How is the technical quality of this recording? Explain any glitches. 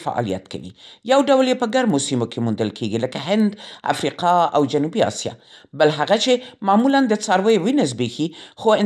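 The recording has one fault that runs throughout: a resampler restarted on every block. Converting 48 kHz to 24 kHz in separate 100 ms blocks leaves a small error at each seam, giving steady ticks at 10 Hz under the speech. Unlike buffer underruns, nothing drops out, and the ticks stop when the signal does.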